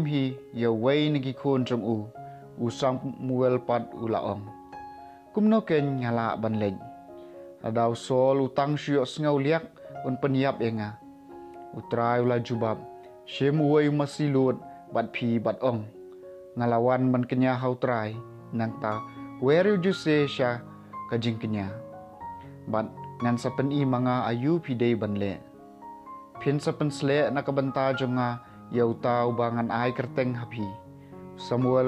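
No technical faults are audible.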